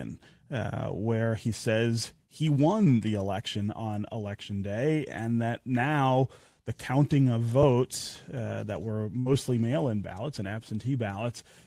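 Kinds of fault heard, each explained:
Burst of packet loss: right after "uh that were", around 9.19 s, a run of packets drops out, so the receiver stretches the last sound into a fading fill for about 63 ms, then jumps ahead to "mail in ballots and", skipping roughly 60 ms of speech.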